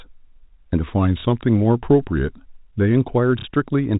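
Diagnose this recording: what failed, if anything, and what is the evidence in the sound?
From 0.86 to 2.96 s the speech slows about 6% and drops about 112 cents, then snaps back. That is likely a drift correction step in the buffer.

Packet loss with last packet repeated, a network fault. At 1.2 s, 30 ms repeats; at 3.39–3.45 s, 60 ms. The single repeat at 1.2 s is a small blip and the run at 3.39 s stutters robotically, which fits 30 ms packets.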